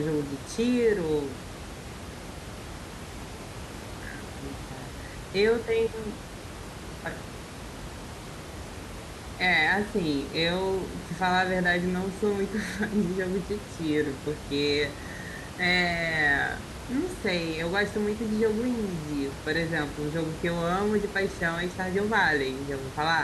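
Speech recording with no technical faults found; the room noise heard underneath sits about 12 dB below the speech and comes from the recording space, not the signal chain.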